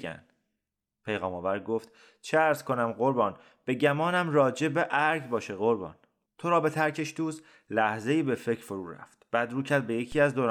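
At 10.12 s the zero line of the waveform jumps by about -33 dBFS, a DC step such as a converter recalibrating or an offset input being switched in, then decays away at a rate set by a 5 Hz high-pass. It sounds as a low thump while the speech continues unchanged.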